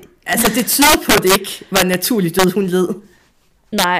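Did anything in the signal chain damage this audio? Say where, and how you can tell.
Yes. Violent cracks tear through loud speech at 0.33–1.36 s, 1.76–2.44 s and 3.79–3.84 s. This is integer overflow in sample-format conversion: peaks pushed about 7 dB and 3 dB past full scale wrapped to the opposite sign instead of clipping.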